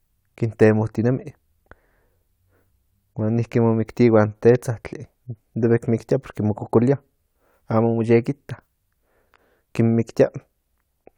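No technical faults can be heard anywhere in the speech. There is nothing to place in time order, since no event interrupts or alters the audio at any point.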